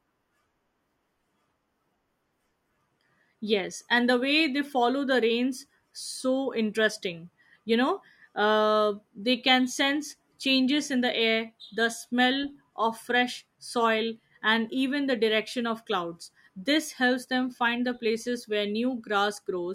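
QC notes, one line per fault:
No faults heard.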